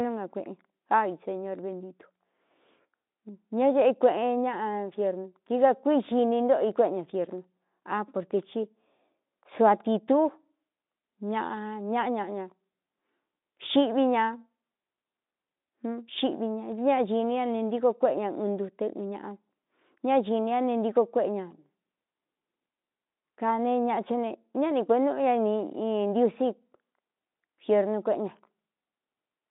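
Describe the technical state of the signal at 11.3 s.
At 11.3 s the speech is intact, with the Speex coding and the narrow telephone-style band introducing no audible fault at that point.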